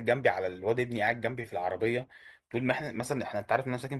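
No technical faults are audible.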